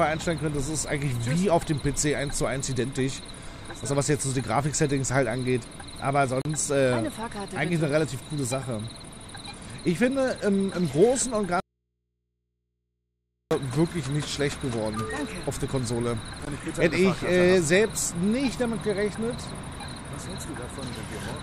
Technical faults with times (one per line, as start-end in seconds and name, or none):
6.42-6.45 gap at a join of encoded pieces
11.60-13.51 audio dropout to a faint residue
16.45 gap at a join of encoded pieces